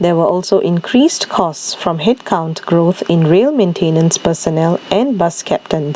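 Across this speech clip the gain pumps, a gain swing of about 15 dB that leaves the level squashed and flat. This gain pumping is likely caused by input gain set far too high, with a fast limiter or compressor clamping down on each loud sound. The call's microphone processing tops out around 8 kHz.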